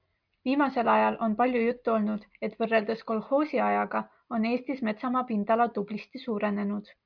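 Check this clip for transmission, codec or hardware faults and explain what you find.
No faults detected.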